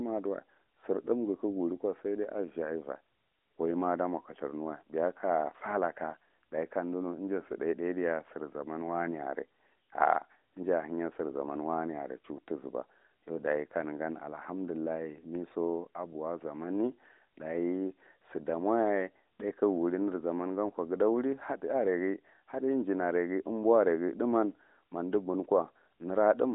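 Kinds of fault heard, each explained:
Nothing here counts as a fault; the speech just comes through a narrowband mobile line working the way it's meant to.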